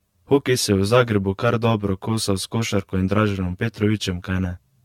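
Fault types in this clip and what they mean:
Channel delay (comb filtering): one channel trails the other by around 10 ms, and the mono sum cancels at evenly spaced frequencies from about 50 Hz upward, roughly 100 Hz apart. The speech sounds hollow and phasey, and a spectrogram shows fixed horizontal notch stripes throughout.
Generation loss: the speech sounds swirly and smeared, with blurred consonant attacks and a hollow quality. The likely cause is repeated lossy re-encoding, consistent with several passes of AAC-LC near 96 kbit/s. A spectrogram shows nothing above 17 kHz, plus patchy holes and grainy noise.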